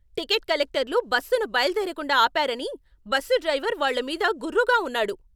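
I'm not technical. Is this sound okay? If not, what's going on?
Yes, nothing technically wrong can be heard anywhere in this recording.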